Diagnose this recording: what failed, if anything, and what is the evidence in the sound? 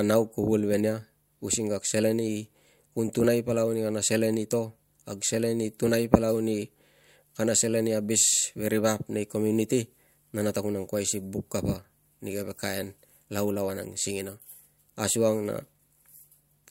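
Nothing in the speech points to a failure at any stage, so there's nothing to trace back here.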